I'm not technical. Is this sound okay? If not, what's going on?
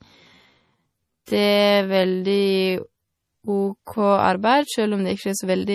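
No. First, this is likely low-bitrate audio saved at a high bitrate: the speech was squeezed into a small MP3, then saved again as a larger one. The larger copy can't restore what was lost, so the damage from the small copy is still there throughout.

Second, from the start to 4.02 s there's a time-stretched section. Software likely slowed it to roughly 0.59 times normal speed while keeping the pitch. That part drags, then the pace jumps back to normal.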